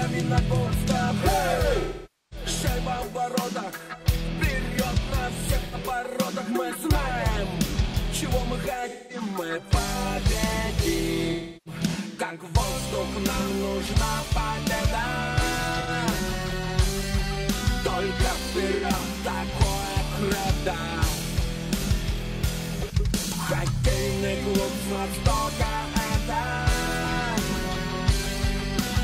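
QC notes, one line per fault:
1.80–2.46 s, AAC frame loss with concealment: a half-second smeared, noisy stretch where the decoder rebuilds about 512 ms of missing frames from the last good spectrum.
5.64–5.75 s, AAC frame loss with concealment: a brief phasey blur, about 85 ms of lost frames filled in from the preceding spectrum.
8.89–9.21 s, AAC frame loss with concealment: a smeared, noisy patch lasting about 213 ms, where the decoder substitutes repeated spectral content for the missing frames.
11.32–11.81 s, AAC frame loss with concealment: a roughly third-of-a-second stretch of blurred, noisy sound as the decoder conceals about 341 ms of dropped frames.
15.80–15.90 s, AAC frame loss with concealment: a short phasey smear, about 85 ms of missing frames replaced with content rebuilt from the last good spectrum.
18.74–18.85 s, AAC frame loss with concealment: a quick noisy blur, about 85 ms of lost frames reconstructed from the preceding spectrum.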